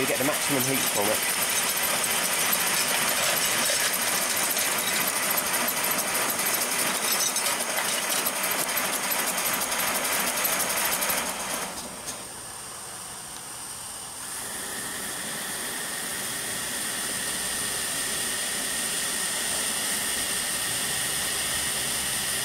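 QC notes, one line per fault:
Nothing stood out on listening to this audio.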